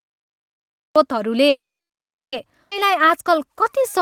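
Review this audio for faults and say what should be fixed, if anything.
The clip opens with a cut-off start. From 0 to 0.96 s there's pure digital silence, and then the speech just appears at 0.96 s, mid-sound, with no natural attack. The capture or stream got going after the talker had already started, so the beginning of that sound was never recorded. To prevent it, start recording (or open the stream) a beat before anyone talks, or keep a short pre-roll buffer running.

Next there's a call audio freeze from 1.49 to 2.34 s. The last bit of sound gets stretched into a fading buzz, and then roughly 750 ms of that is flat silence before the speech resumes right where it left off. About 830 ms has been inserted with nothing lost, so the whole thing is pushed later by that much. The likely cause is packets stalling in transit long enough to drain the jitter buffer. A steadier network path or a slightly deeper buffer target would keep it from running dry.

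Right after that comes a skip ahead at 2.70 to 2.73 s. Playback jumps with only about a 10 ms patch, and roughly half a second of speech is simply gone, with the two sides spliced almost directly together. That fits the backlog from the freeze: a pile of late audio arrived at once, the buffer overflowed, and it discarded the excess to pull the delay back down by around half a second. Smoother buffer adaptation, without hard flushing, would avoid throwing speech away.

From 2.86 s to the end at 4.02 s you get a jitter buffer slow-down. The talker sounds a little draggy at the same pitch, running at about 93% speed, with roughly 80 ms added by repeating single pitch periods and bits of pauses over and over. The receiver was rebuilding its reserve after the earlier drop. Tuning the buffer so it refills gently during pauses, rather than stretching voiced speech, would keep this from being audible.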